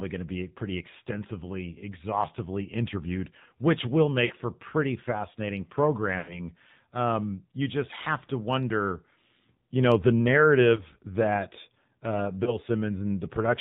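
Throughout, the speech sounds buzzy and synthetic with nothing above 4 kHz, plainly audible damage from the AMR narrowband mobile codec, which fits its 7.4 kbps mode. At 4.26 to 4.32 s, 6.18 to 6.40 s and 12.44 to 12.57 s, the sound stretches, dips or warbles before recovering; these are lost AMR speech frames, where the decoder repeats its last good settings with falling gain.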